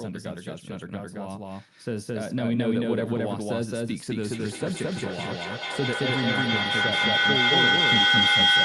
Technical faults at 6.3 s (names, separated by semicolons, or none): doubled audio track; feedback howl